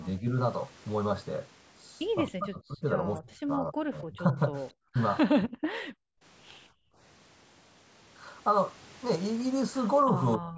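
From 0.19 to 0.28 s the speech dips by about 10 dB for roughly 100 ms. This is likely speech suppressed in double talk: the echo canceller, hearing both sides at once, turns the near talker down along with the echo. The waveform shows a brief notch in the envelope.

At 2.27 s a faint echo leak appears. A copy of the speech returns 269 ms late, about 25 dB below it, likely residual loudspeaker sound the canceller missed. On a spectrogram it is a weak, delayed repeat of the preceding harmonic pattern.

From 2.35 to 5.67 s the suppression is far heavier. The speech drops by as much as about 40 dB in pieces totalling roughly 2 s, and the waveform shows chunks cut nearly to silence.

Between 5.95 and 6.98 s the background is gated by the echo canceller. The room sound falls away by 39 dB for about 500 ms in total while the loudspeaker plays, then returns. The spectrogram's noise floor goes blank there. 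The band-limiting to 8 kHz from the call processing is visible throughout.

From 10.06 s to the end the speech is pulled down by up to about 30 dB across roughly 300 ms, again in double talk.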